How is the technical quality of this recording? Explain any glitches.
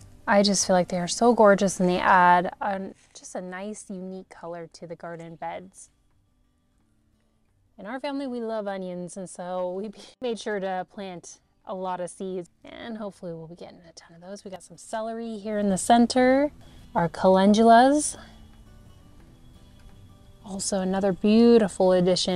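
The recording has two glitches, both zipper noise. From 2.3 to 3.11 s and from 15.35 to 15.71 s, a gain change of roughly 15 dB (down, then back up) is applied in coarse, unsmoothed steps, around a hundred a second. Each jump clicks, giving a fine zipping texture over the sound.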